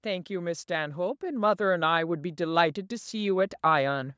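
From 0.05 s to 4.13 s, the level climbs steadily. This is automatic gain rising. The gain control judged the input too quiet. It then raised its gain slowly across almost the whole clip, by about 8 dB in total. The speech and the background noise swell together, so the room grows louder along with the talker. Through the call microphone processing, the band stops at 8 kHz.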